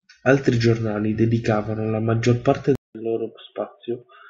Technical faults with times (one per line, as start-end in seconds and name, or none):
2.75-4.29 input switched to a poorer device